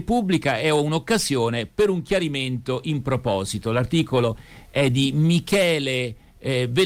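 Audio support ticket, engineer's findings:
No audible faults found; playback normal throughout.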